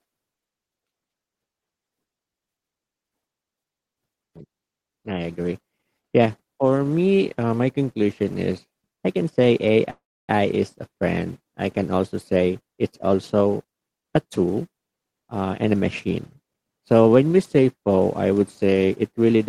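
At 9.90 to 10.30 s, a call audio freeze: sound stalls into a fading buzz, then about 290 ms of silence, likely from the jitter buffer running empty. A spectrogram shows smeared, decaying bands before a blank gap.

From 13.41 to 16.52 s, a jitter buffer speed-up plays speech at 110% speed by trimming about a third of a second in small pieces. It sounds hurried at unchanged pitch. Harmonic spacing stays constant while syllables compress.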